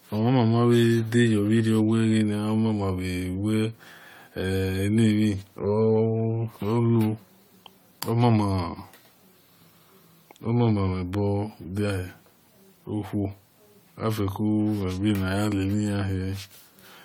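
Generation loss throughout: the speech was likely re-encoded about seven times, fitting AAC at 96 kbit/s, leaving it swirly, hollow and smeared with blurred attacks.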